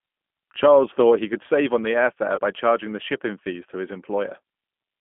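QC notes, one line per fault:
Throughout: G.729 codec. Speech is confined to roughly 200 Hz to 3.4 kHz and has a plainly rough, synthetic edge. This fits an 8 kbit/s coder rebuilding each 10 ms frame from a vocal-tract filter, pitch predictor and a few sparse pulses.
2.36 to 2.40 s: VoIP packet loss concealed by the speech codec. About 20 ms of audio, consistent with two 10 ms frames, is replaced by a fading extrapolation of the previous pitch and filter. The decoder's frame-to-frame dependence leaves the sound briefly weakened after the gap.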